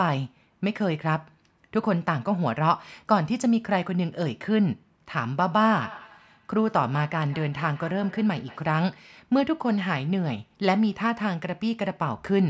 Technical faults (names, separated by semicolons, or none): feedback echo between two devices